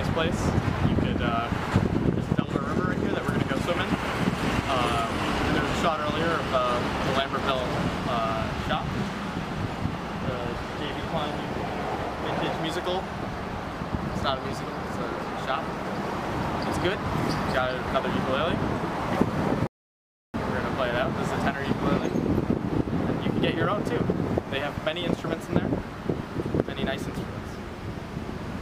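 At 19.67 s the player ran out of downloaded audio, a rebuffering stall: playback halts into silence for 0.67 s, then resumes exactly where it stopped, nothing lost.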